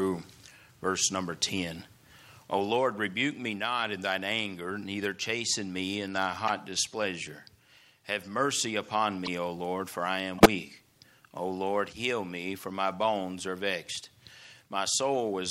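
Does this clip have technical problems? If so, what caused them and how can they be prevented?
Yes. Corrupt frame decoded shows up three times: a brief glitch at 6.48 s, another from 9.25 to 9.28 s, and the loudest burst from 10.38 to 10.46 s, peaking around -10 dBFS. Flipped bits in the compressed data led the decoder to rebuild those frames with wrong gains or codes, placing energy at unrelated frequencies. Unlike concealed packet loss, the sound isn't smeared; foreign noise appears instead. Checksums that reject damaged frames and conceal them would prevent this.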